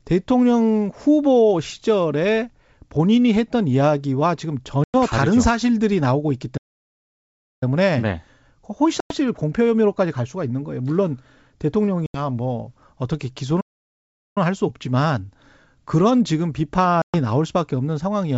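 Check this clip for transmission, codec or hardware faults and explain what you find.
Two kinds of fault turn up in this speech, laid over wideband G.722 coding that sounds clean and clear up to around 7 kHz.

Packet loss on an ADPCM call hits at 4.84–4.96 s, 9.00–9.15 s, 12.06–12.20 s and 17.02–17.20 s, with gaps of about 100, 100, 80 and 120 ms. Each is a hard-edged hole, a handful of packets' worth. The decoder's predictor and step size drift from the sender's, so speech comes back slightly distorted before settling.

Playback stalls cut the sound dead mid-flow at 6.57–7.63 s, about 1.04 s, and again at 13.60–14.38 s, about 0.75 s. The silences are much longer than the packet holes. The likely cause is the player running dry or its thread getting blocked, with output resuming once it recovers.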